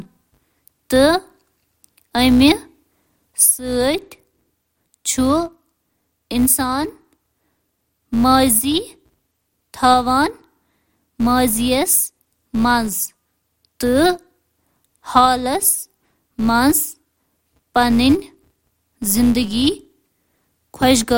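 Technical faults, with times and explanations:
Throughout, filter restarted on every block. The filter loses its state at each block boundary and starts again from silence. Each restart adds a small click. These repeat as a steady 188 Hz buzz that fits a 256-sample block, and it rises and falls with the speech level.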